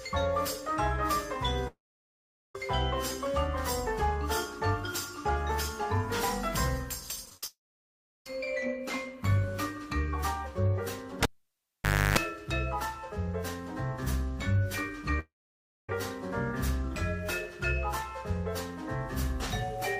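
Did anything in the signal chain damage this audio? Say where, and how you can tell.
Yes. Three stretches, at 1.67 to 2.55 s, 7.46 to 8.26 s and 15.19 to 15.89 s, sound like a long network dropout, likely from packets failing to arrive. Each begins with a brief fading continuation of the last sound, then goes silent for roughly 0.6 to 0.8 s. On a spectrogram, a smeared tail gives way to blank columns before the audio resumes further on.

From 7.25 to 7.46 s there is repeated packet loss with a robotic sound at the network stage. Six short holes, the longest 54 ms, are each patched by repeating the previous sound, so about half of that span is concealment. The result is choppy, with pieces missing. The waveform shows rapid repeated fragments with no natural continuity.

Between 11.23 and 12.18 s, a cable pulled and plugged in damages the analogue wiring. A pop starts about 0.9 s of near silence, which includes roughly 0.3 s of 50 Hz mains buzz, and another pop marks the return. 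A spectrogram shows vertical clicks at each end and a bright low-frequency band with harmonics between them.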